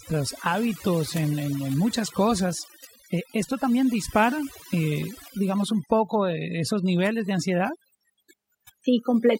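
Throughout, overdone noise removal gates off bands near its noise estimate, leaving twinkling specks in near-silent gaps, unlike low-pass dullness.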